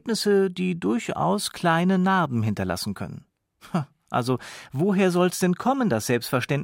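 No technical faults can be heard anywhere in this speech recording, and the signal stays stable and intact throughout.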